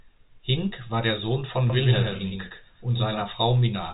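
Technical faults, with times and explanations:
1.70 to 3.22 s, doubled audio track: the speech is likely captured a second time through a slower path, so a dry copy trails about 100 ms behind at roughly 5 dB quieter, with no room colour, starting and stopping abruptly.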